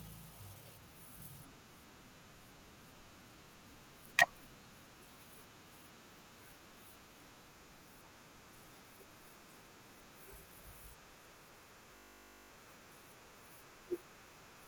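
At 11.96 s the speech locks into a system hang loop until 12.5 s: the system stalled while the audio hardware kept replaying one 20 ms slice of its buffer. That repeats at 50 Hz, so you hear a steady buzz, and roughly half a second of speech is lost.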